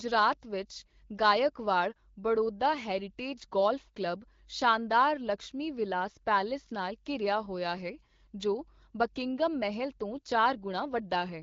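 Nothing goes wrong anywhere in this speech, and the AMR wideband (HD Voice) coding it passes through leaves only the light touch you'd expect at a rate around 12.65 kbit/s.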